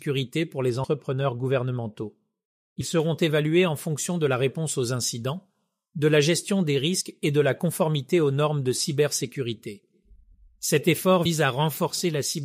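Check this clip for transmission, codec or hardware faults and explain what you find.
Two faults are audible in this speech: a stretch of muffled, dulled tone near the start, and four brief jumps where a short piece of the audio goes missing.

From 0.70 to 3.00 s, ending just before "évalués en fonction de", the speech sounds dull and muffled, with the treble sloping away to about 10 dB down at 10 kHz relative to 1 kHz. This is de-emphasis applied wrongly: a treble-cut filter was run on audio that had no pre-emphasis to undo, or was run twice.

At 0.83, 2.80, 7.00 (between "de la gestion des" and "et de la conformité") and 11.25 s, the speech jumps ahead. These are compressed frames skipped. Each jump drops roughly 50 to 70 ms, which fits two or three 24 ms frames that were missing from the file or that the decoder rejected.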